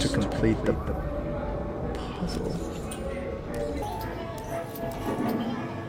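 From the very start until 3.12 s, a doubled audio track runs: a second full-band copy, roughly 10 dB quieter, trails the original by about a fifth of a second, with no decay or room colour, and cuts off abruptly. A slower parallel capture path is the likely cause.

From 3.82 s to the end, a section at the wrong speed plays 1.52 times too fast, so pitch rises by roughly seven semitones and everything sounds high and hurried. This likely comes from the section being played against the wrong clock.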